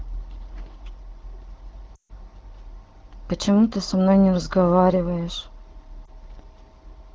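Speech carried over AMR wideband (HD Voice), with lost AMR speech frames at 1.95 to 2.11 s and 6.05 to 6.09 s. The first gap, about 140 ms and consistent with seven 20 ms frames, drops the sound to near silence within two frames. The voice then returns weak or rough. The second, a single frame, is only a brief dip or warble. Unlike a hard dropout to silence, the decoder fills each gap by reusing the last good frame at falling gain.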